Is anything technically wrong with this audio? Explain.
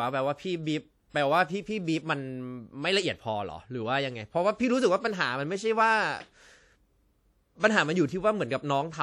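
Yes. Throughout the speech there is plainly audible damage of the kind WMA compression leaves. The sound rings and smears, with a hiss that swells and fades with the voice. Long transform blocks spread quantisation noise over tens of milliseconds. Weak detail drops out. This likely points to a low WMA bitrate near 48 kbps.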